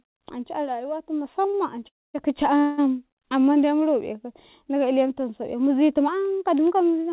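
A short stall from a late packet at 1.50 to 1.55 s holds the speech sound for about 30 ms: the packet arrived late, the jitter buffer emptied, and the receiver stretched the last sound until it came, then resumed with nothing lost. A call audio freeze follows at 1.88 to 2.16 s, where a buzz decays into about 230 ms of silence before the speech resumes where it stopped. A second freeze at 2.58 to 2.80 s, just before "amman de mu ro", fills about 190 ms with a fading continuation and no silence. Both are likely caused by packets held up in transit. A drift correction step starts right after "iletum sau'i mizitum" at 6.08 s and lasts to the end: speed rises 6.3% and pitch about 106 cents, roughly a semitone, likely from clock-matching software changing the playback rate in one step to rebalance its buffer. Throughout, the speech has nothing above 4 kHz, which fits a G.711 mu-law call path at 64 kbps.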